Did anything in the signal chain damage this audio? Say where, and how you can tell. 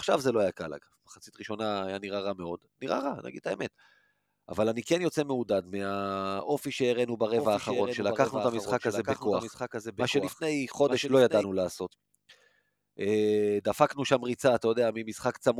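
Yes. From 7.37 to 11.43 s there's a doubled audio track, a clean copy about a second late and roughly 5 dB down, likely from a duplicated edit or a second, slower capture path.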